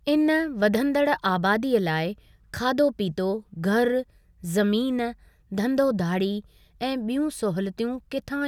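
Nothing is technically wrong with this speech recording.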